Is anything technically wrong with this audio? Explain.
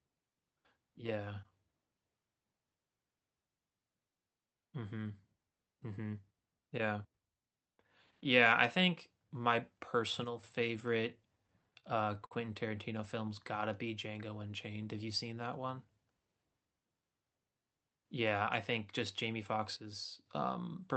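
Yes, there are two kinds of fault in this speech clip.

From 10.24 to 10.43 s, and again from 19.77 to 20.26 s, the level drops abruptly by about 6 dB and then recovers. This is most likely one channel dropping out: with one side of the stereo pair missing, the mono sum keeps only half of the material common to both channels, so the speech sounds suddenly quieter, and anything carried only on the lost side vanishes until the channel returns.

At 11.80 to 11.85 s and 12.26 to 12.33 s there are short stalls from a late packet. In each case a packet arrived after it was needed, the jitter buffer ran dry, and the receiver held the last bit of sound for 29 ms and then 50 ms before resuming where it left off. Nothing is lost, but the speech briefly hangs on a sustained fragment with a faint buzzy or dipped quality, and the second hold is longer. The timing shifts later by the same amounts.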